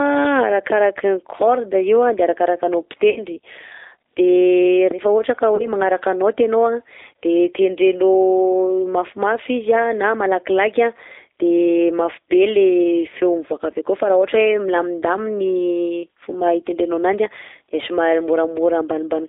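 From the first moment to the end, the speech sounds narrow, slightly rough and synthetic, with nothing below about 300 Hz or above about 3.6 kHz. This is G.729 codec damage, plainly audible, and its character points to an 8 kbit/s G.729A coder on a telephone-band line. The decoder rebuilds each 10 ms frame from a vocal tract filter, a pitch estimate and a handful of pulses, so the fine detail of the voice is replaced by a coarse approximation.

At 3.10 s the voice briefly smears into a stretched sound that weakens, and it stays thin and distorted until about 3.22 s. This is VoIP packet loss concealed by the speech codec. About 60 ms of audio went missing, which fits two lost packets. The decoder carried forward its last pitch and filter while turning the gain down, and because each frame builds on the previous one, the distortion continues after the packets return. A repeat occurs from 5.56 to 5.69 s, where about 30 ms was lost, consistent with a single packet, heard as a brief stretch and a weak recovery.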